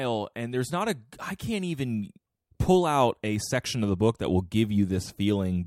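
A speech recording carrying clock slip clicks from 0.38 s to 5.24 s: faint, regular ticks roughly every 0.4 s, around ten in all, each from a single sample dropped or repeated. The likely cause is two free-running device clocks differing by something like 50 ppm, slipping a whole sample each time the drift accumulates. A spectrogram shows evenly spaced thin vertical broadband lines, and the waveform shows tiny one-sample step discontinuities at each.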